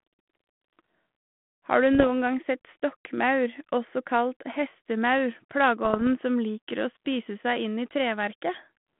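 Pops and short rough bursts with brief level jumps break into the speech from 1.93 to 2.05 s and again from 5.85 to 6.10 s. These are bit errors on an ADPCM link, here the 32 kbit/s G.726 path limited to about 150 Hz to 3.4 kHz. Each flipped bit throws off the decoder's step size and prediction, so the damage rings on for milliseconds. The error rate is around half a percent in the first burst and lower in the second.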